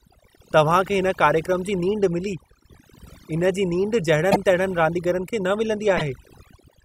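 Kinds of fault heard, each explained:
Overdone noise removal: Throughout the speech, the background drops to near silence speckled with twinkling. A noise reducer set far too aggressively is cutting individual frequency bands down or out whenever they come close to its noise estimate. Because the quieter parts of the voice fall inside that range, they are stripped away along with the noise.
Repeated frames: Twice, the speech hiccups as a tiny slice plays again. At 4.31 s, just before "रांदीगरनि खे न", a 48 ms block repeats once, likely two codec frames. At 5.97 s, just after "रांदीगरनि खे न", a 24 ms block repeats, pointing to a single frame. Compressed frames were written or sent twice, so the decoder replayed them, stretching the clip by about 72 ms in total.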